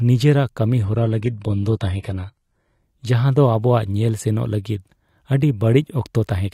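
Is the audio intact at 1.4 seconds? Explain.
No, 1.4 s falls inside an adaptive stream at a lower bitrate, from 0.83 to 2.83 s. The player switched to a lower-bitrate version as the connection slowed, fitting HE-AAC near 16 kbit/s, so the speech turns abruptly artefact-laden, with no gap.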